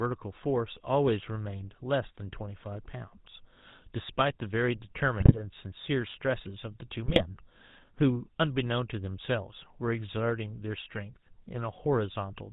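Speech carries the GSM full-rate codec's buzzy, gravelly roughness for the whole clip, with nothing above 4 kHz. The degradation is plainly audible and fits a 13 kbps full-rate stream, whose pulse-driven vocal-tract model keeps only every third excitation sample. Unlike narrowband filtering alone, the grit sits inside the voice itself. Two brief bursts of GSM bit errors, from 5.2 to 5.41 s and 7.06 to 7.23 s, turn the voice into squawks and gargling. Corrupted filter, pitch and gain values distort a run of frames. These bursts differ from packet loss because the sound lurches and blares rather than dropping out.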